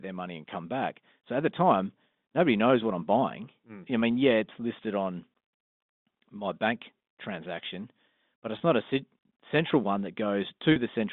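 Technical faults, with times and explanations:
8.58–8.60 s and 10.72–10.76 s, packet loss with pitch repetition: about 20 ms of audio goes missing between "my bank transaction but" and "not a central one", which points to a single lost packet, and about 40 ms later, fitting two. Each gap is filled by looping the last pitch period, heard as a brief held, buzzy tone rather than the silence or click of a plain dropout. Both gaps are too short to fade out before the speech cross-fades back in, over the normal 200–3600 Hz G.711 telephone band.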